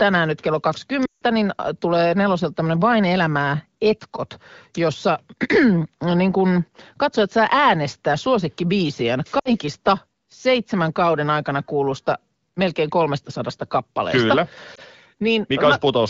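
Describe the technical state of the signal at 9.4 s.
At 9.39 to 9.54 s, right after "katsojat saa äänestää suosikkibiisien", there are lost AMR speech frames. About 60 ms fails, which fits three 20 ms frames. The wideband decoder repeats its last pitch and vocal tract settings at falling gain. Unlike a hard dropout, this gives a sound that drops to near silence within two frames before speech returns.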